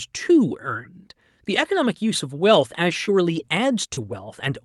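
From 2.91 s to 4.13 s, the speech carries scattered short gaps. Around three small dropouts land in this stretch, each 30 ms or less. About 60 ms of audio went missing in the call. The receiver patched each hole by stretching the sound just before it, rebuilding about 140 ms in total. The speech stays mostly clear between the gaps. Each patch shows up as a brief tick, smear or hiccup over the call codec's narrowed top end.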